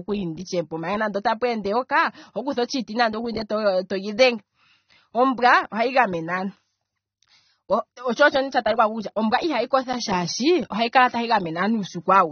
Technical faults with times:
0.00-12.32 AAC compression

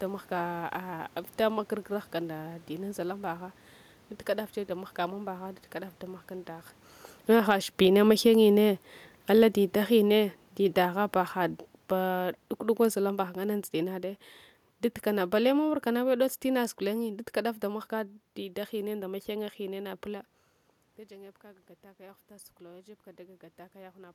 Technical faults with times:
7.16-17.63 automatic gain falling
20.09-24.10 automatic gain rising

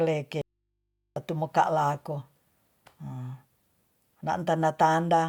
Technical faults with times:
0.41-1.16 audio dropout to a faint residue

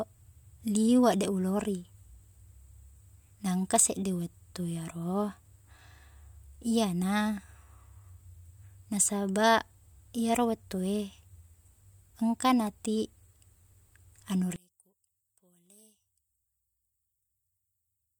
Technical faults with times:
14.56-18.19 one channel inverted

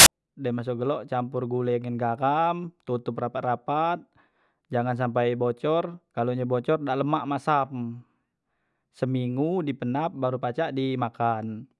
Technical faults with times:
0.00-0.06 file tags played as audio

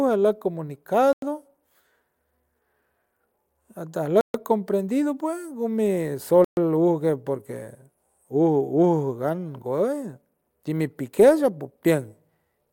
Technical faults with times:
1.13-1.22 Bluetooth stall
4.21-4.34 Bluetooth stall
6.44-6.57 Bluetooth stall

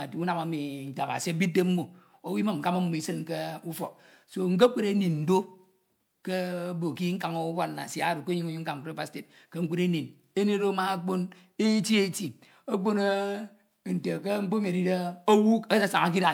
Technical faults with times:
0.00-16.33 generation loss

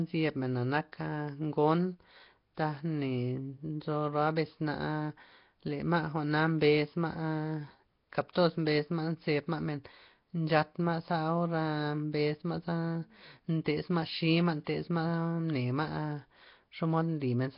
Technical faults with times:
0.00-17.58 Nellymoser compression

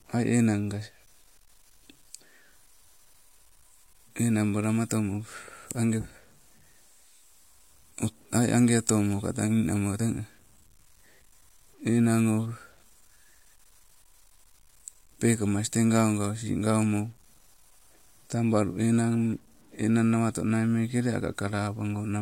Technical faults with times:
0.00-22.21 low bit depth without dither

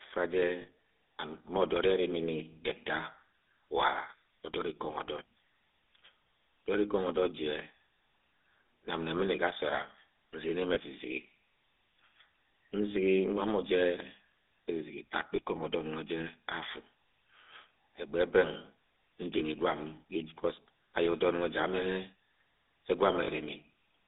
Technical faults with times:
0.00-24.08 GSM full-rate codec
0.62-0.69 lost GSM frames
10.74-10.77 lost GSM frames
15.36-15.40 lost GSM frames
19.38-19.41 lost GSM frames
23.24-23.29 lost GSM frames

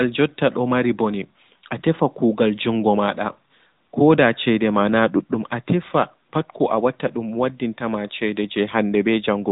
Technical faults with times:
0.00-9.52 AMR narrowband mobile codec

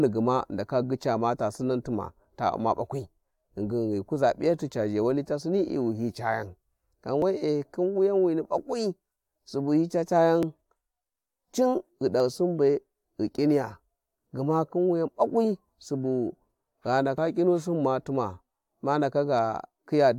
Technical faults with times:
2.25 audio missing between chunks
7.22 audio missing between chunks
10.43 overlap between stream segments
12.20 audio missing between chunks
17.18 audio missing between chunks

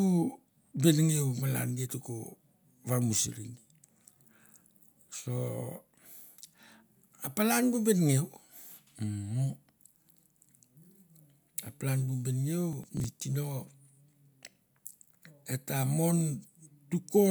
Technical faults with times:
12.73-13.04 processor overload crackle

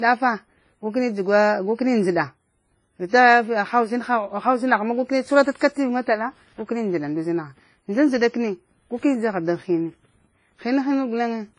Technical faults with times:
0.00-11.58 transcoding between lossy codecs

